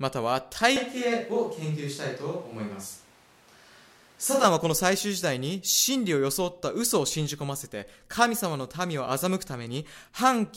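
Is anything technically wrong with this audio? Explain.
Yes. From 0.76 s to 4.44 s the speech turns roomy and hollow, with thinner bass and a noise floor of around 30 dB below the speech. The level stays roughly the same. Both changes are abrupt. This is likely a switch to a distant microphone. The close microphone's feed dropped out and a farther one took over. That mic picks up more reflections and less low-end proximity boost, so the sound loses body.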